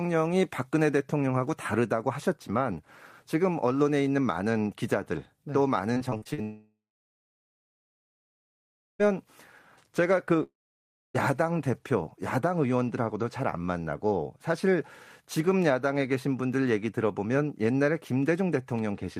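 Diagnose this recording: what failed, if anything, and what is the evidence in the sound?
From 5.93 to 6.40 s the speech turns choppy and robotic as six short gaps are patched with repeated sound. This is repeated packet loss on the network.

At 6.42 to 9.01 s and 10.43 to 11.16 s, a short fading buzz gives way to near-silence, and speech resumes with that stretch missing, likely from a long network dropout.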